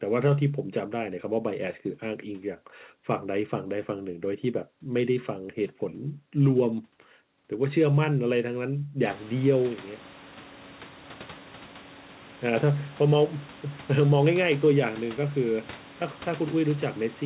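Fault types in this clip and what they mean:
No fault can be heard in this speech recording. The background noise of the room rises by about 25 dB at around the 9-second mark but stays about 22 dB below the speech, and the call path carries nothing above 4 kHz, as expected for G.711 A-law at 64 kbps.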